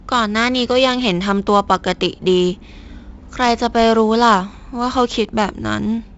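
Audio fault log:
Throughout: 4-bit ADPCM compression. Each sample is coded as a coarse 4-bit step from a predicted value, so a heavy gritty hiss rides every loud stretch of speech and sharp onsets distort where the step size lags. Nothing remains above 7.7 kHz, which fits a 64 kbps stream.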